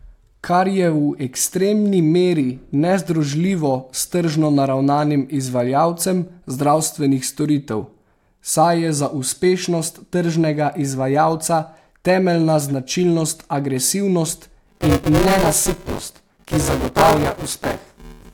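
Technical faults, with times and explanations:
14.67–18.34 s, buffer tearing: after "temeljna značilnost agresivnost" a steady robotic buzz at 200 Hz rides on the speech. The writer and reader of the ring buffer cross each period, consistent with a buffer period of about 5 ms, so most of each period replays audio roughly 20 ms old, with hard joins.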